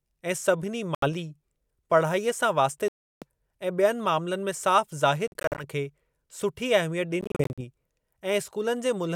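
Speech drops out at 0.95 s after "ऐं सभिनी", 2.88 s after "पढ़ाईअ सां", 5.28 s and 7.21 s, likely Bluetooth dropouts: late packets discarded, leaving silent gaps, the last two broken into short scattered holes.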